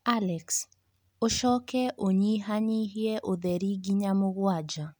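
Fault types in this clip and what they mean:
No audible faults detected.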